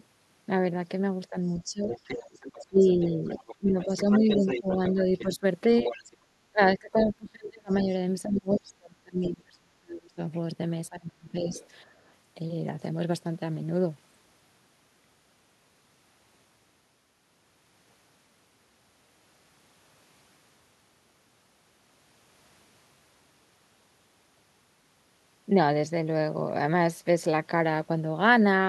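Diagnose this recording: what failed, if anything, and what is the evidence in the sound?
The call processing is where this one goes wrong, and the first problem is speech suppressed in double talk. Between 1.3 and 11.53 s the talker keeps dipping, sometimes by something like 30 dB at the worst, adding up to roughly five seconds of lost or thinned speech. Both ends were likely talking at once, and the echo canceller, unable to tell the near talker from loudspeaker echo, pulled everything down together.

Same stage, second symptom: the other side's voice leaking through. From 1.49 to 6.04 s there's a second voice sitting under the talker, not far below, maybe 10 dB down. Two much fainter scraps follow, at 7.71 to 7.83 s and 11.52 to 11.68 s, way down around 25 dB. The canceller likely didn't fully subtract the far end's loudspeaker playback from the mic signal.

Last one is the background gated by the echo canceller. 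At 11.86 to 12.05 s the room tone ducks by about 10 dB for around 200 ms, then comes straight back. That's the canceller clamping the microphone hard while the loudspeaker was active, right on the heels of that last leaked fragment, and releasing once it decided the echo had passed.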